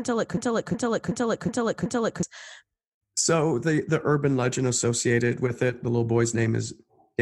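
A system hang loop runs from 0.37 to 2.23 s in this speech clip. A single 0.37 s slice of audio repeats exactly five times at about 2.69 Hz, giving a slow, machine-gun-like stutter rather than a buzz. The computer or audio driver stalled while the sound hardware kept replaying the same ring buffer, whose length fits a 16384-sample buffer. Roughly two seconds of the real audio never reached the output.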